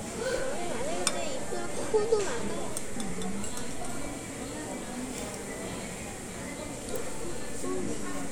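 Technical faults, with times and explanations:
0.38–4.07 s and 6.90 s to the end, DC step: a low thump at 0.38 s, another as it drops away at 4.07 s, and a third at 6.90 s, with the sound carrying on unchanged through each. The waveform's zero line suddenly shifts by about -33 dBFS and holds there, then snaps back. That abrupt jump in the baseline is what the ear hears as the thump or click. The second offset is still present when the audio ends.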